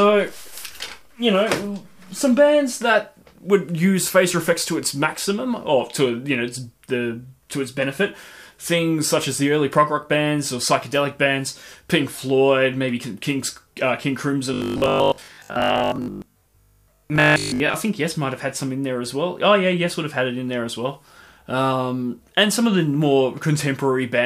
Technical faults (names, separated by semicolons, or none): robotic sound from repeated short buffers